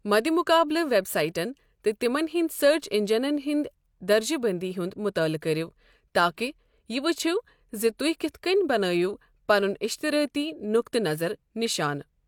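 No technical faults can be heard anywhere in this recording.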